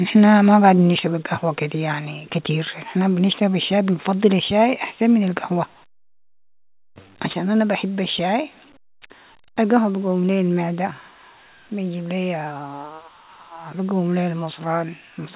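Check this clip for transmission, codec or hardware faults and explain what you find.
Three hardware-level faults show up in the speech: microphone overload, the microphone volume stepped down, and the microphone volume stepped up. The call path itself sounds band-limited below 4 kHz, which fits a G.711 A-law link.

Microphone overload hits at 0.97–0.99 s, 2.45–2.51 s, 3.32–3.38 s and 7.29–7.35 s. The peaks most likely run past the converter's ceiling, by about 9, 4, 2 and 8 dB. Their tops get sliced flat. The worst bursts, at 0.97 s and 7.29 s, clip around a tenth of the samples and crackle harshly. The others clip only about 1% of the samples. The one at 3.32 s comes just before "الشاي بنفضل الشاي احسن".

The microphone volume steps down at 0.99 s, between "ما قاعدين" and "القهوة كدي يعني". It drops again at 7.33 s, just before "انا بحب الشاي". Each drop follows a clipped peak. The cut is likely the call software's gain control reacting to the overload. 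Voice and background fall together, by about 4 dB and then about 5 dB.

The microphone volume steps up at 13.29 s. The call software raises the device's input gain in one jump of about 4 dB. Voice and background both lift abruptly at that moment. No distorted peak comes before it.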